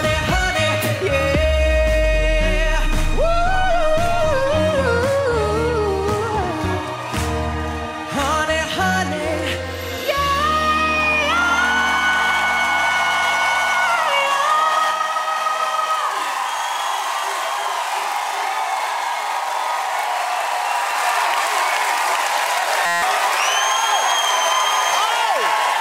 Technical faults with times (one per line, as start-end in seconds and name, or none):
14.91-20.91 channel delay (doubling)
22.86-23.02 system hang loop